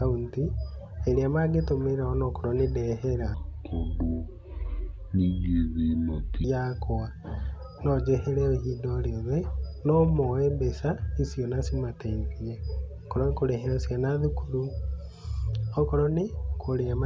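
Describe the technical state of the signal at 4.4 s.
At 4.4 s there is a wrong sample rate fault (3.34–6.44 s, after "ona okorwo nĩ ndehera"). Speech plays at 0.667 speed and about 7 semitones low, fitting 24 kHz audio played at 16 kHz. Spectrogram harmonics shift downward, and the waveform looks stretched.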